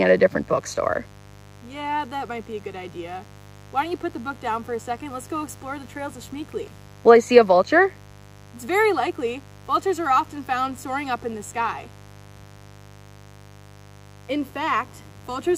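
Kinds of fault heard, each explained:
Mains buzz: switching spikes from 50 Hz mains leak in, leaving a steady raspy buzz under the whole clip, at roughly 25 dB below the sound.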